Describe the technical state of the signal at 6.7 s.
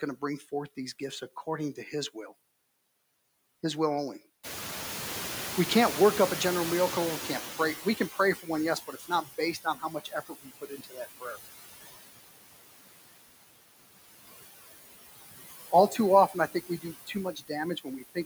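At 6.7 s the noise suppressor is still catching up. The room noise jumped by about 19 dB around 4.5 s, and the suppressor's noise estimate takes 4 s to follow, from 4.43 to 8.43 s. Here the louder background therefore comes through with less reduction than it should, sinking gradually toward about 14 dB of cut as the estimate adapts.

Noise suppressor artifacts are also present, as throughout the clip. The suppressor lowers the frequency bands it judges to be steady noise, frame by frame, by about 17 dB. The residual background therefore dips in the gaps between words and swells back up underneath the speech.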